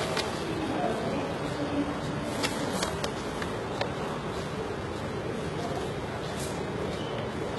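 Likely HE-AAC compression at a very low bitrate, around 16 kbps, rebuilding the treble from copied lower bands throughout, leaving it gritty and metallic, with nothing above 11.8 kHz.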